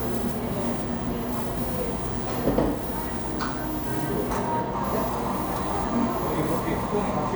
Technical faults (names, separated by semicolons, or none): sample clock jitter